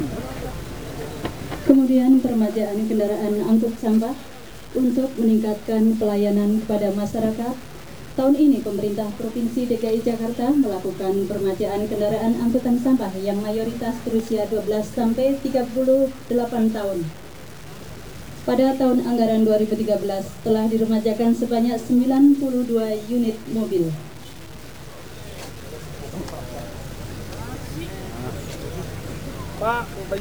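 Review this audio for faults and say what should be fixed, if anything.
From start to end the sound carries a grainy distortion that moves with the signal. Quiet passages turn gritty or sputter. This is likely low bit depth without dither, which fits truncation to 7 bits, with error roughly 25 dB below the signal. The waveform shows stair-stepped levels. The spectrogram shows a noise haze that follows the signal and vanishes in silences. To prevent it, keep a higher bit depth and apply dither before any reduction in word length.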